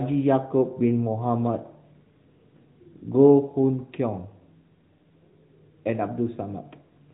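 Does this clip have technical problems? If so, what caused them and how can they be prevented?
Yes. Throughout the speech the AMR narrowband mobile codec is plainly audible. Nothing above 4 kHz survives, and the voice carries a buzzy, synthetic edge from the codec rebuilding each 20 ms frame from a vocal-tract model and a few pulses. The degree of damage fits a mid-rate mode of roughly 10 kbps. A simple low-pass filter would only dull the sound, while this codec also adds the synthetic texture. To prevent it, use a wideband or full-band codec, such as AMR-WB or Opus, or record locally.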